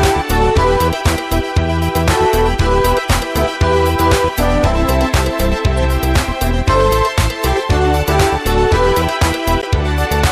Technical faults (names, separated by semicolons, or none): corrupt frame decoded